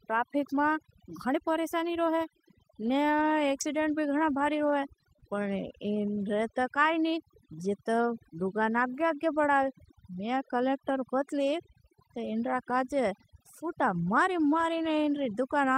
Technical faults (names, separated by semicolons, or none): overdone noise removal; scattered short gaps